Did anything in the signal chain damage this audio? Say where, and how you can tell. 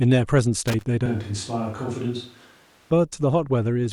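Yes. Loose connector crackle runs from 0.68 to 0.85 s and sits in the analogue wiring. An irregular burst of scratchy crackle lasting under a fifth of a second cuts across the speech. A worn or dirty contact in a cable or plug is making and breaking as it shifts, chopping the signal on and off. Any DC on the line turns each break into a small pop.

From 1.06 to 2.91 s the speech turns roomy and hollow, with thinner bass and a background noise floor roughly 30 dB below the speech. The level stays about the same. The change in and back out is abrupt, and the likely cause is a switch to a distant microphone at the capture stage, with the close microphone's feed dropped and a farther pickup such as a camera microphone used in its place.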